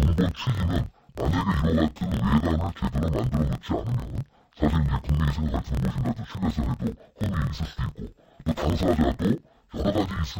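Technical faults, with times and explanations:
Throughout, interleaved audio read as planar: each 26 ms block of alternating left and right samples is split into halves played as separate channels, so the speech sounds an octave low and doubled, with a choppy buzz at about 38 Hz, the block rate.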